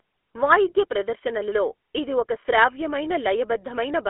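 Throughout, the speech carries GSM full-rate codec damage: a buzzy, gravelly roughness from coarse pulse-driven excitation, which fits 13 kbps coding. A spectrogram shows nothing above 3.8 kHz and energy confined to a 300 Hz to 3.4 kHz telephone band.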